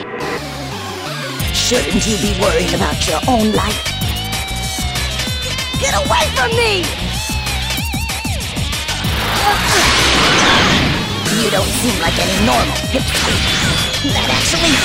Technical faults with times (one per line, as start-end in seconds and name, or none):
2.67-14.84 wrong sample rate